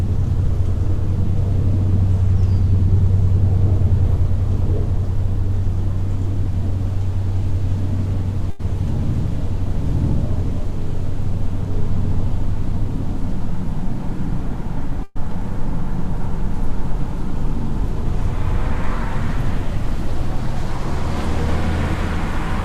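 At 8.50 s there's a short stall from a late packet. The jitter buffer ran dry, so the receiver held the last bit of sound for about 90 ms until the packet turned up, then picked up where it left off. Nothing's lost; you just hear a brief smeared hold.

At 15.03 s comes a call audio freeze lasting until about 15.17 s, most likely from packets getting held up in transit. The receiver stretched the last sound into a fading buzz or hiss for about 124 ms, never dropping to silence, then carried on with nothing missing, just later.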